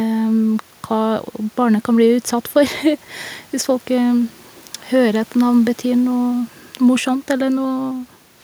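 No technical faults can be heard in the speech, and the only steady background is the room's own noise, which sits about 34 dB below the voice.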